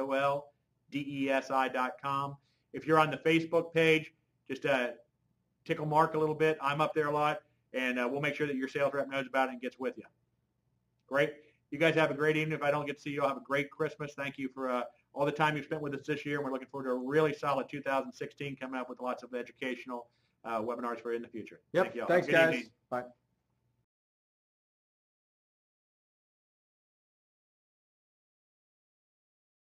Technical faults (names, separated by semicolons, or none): none